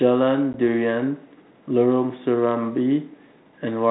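Speech over an ADPCM telephone link, sounding like light coding at 32 kbit/s, has packet loss on an ADPCM call at 0.53 to 0.55 s. About 10 ms of audio, roughly one packet, drops to a hard-edged silence, and the decoder's predictor loses step, so the speech returns slightly distorted before settling.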